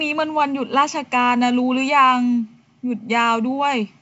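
Nothing stood out on listening to the speech, which comes across as ordinary wideband telephone audio with nothing heard above about 7.7 kHz.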